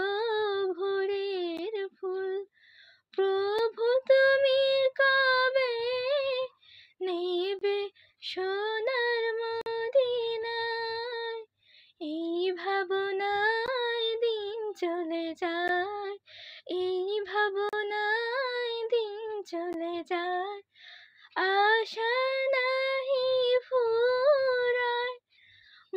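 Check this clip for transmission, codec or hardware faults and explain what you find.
Eight short dropouts from gaps between stream segments occur at 1.57, 3.59, 7.59 to 7.61, 9.61 to 9.66, 13.66, 15.68, 17.69 to 17.73 and 19.73 s, on a 2.0 s segment grid. Segment timestamps fail to line up, so the player inserts silence for the missing span, from about 5 to 48 ms. Each hole cuts the sound abruptly, with nothing lost. A waveform shows flat silent stretches with hard edges, and a spectrogram shows thin vertical blank columns across all frequencies.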